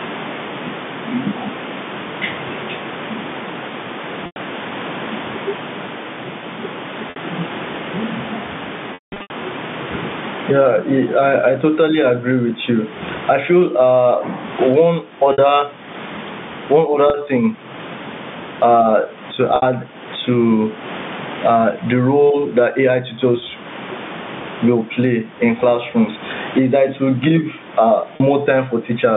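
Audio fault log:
Throughout: gain pumping. The gain swings by around 20 dB, so loud and quiet passages sit close in level and the speech sounds squashed. The likely cause is input gain set far too high with a fast limiter or compressor clamping down on each peak and releasing in the gaps.
4.26 s, 7.10 s, 8.94–9.30 s, 15.32 s, 17.10 s, 19.56 s, 23.40 s, 28.16 s (right after "it will give uh"): packet loss with pitch repetition. Gaps of 20 to 100 ms, consistent with 20 ms packets, are bridged by repeating the last pitch period, giving a brief held, buzzy tone. At 8.94–9.30 s, 300 ms is lost across 360 ms, the longest run 180 ms, so the repetition fades to silence before speech cross-fades back in.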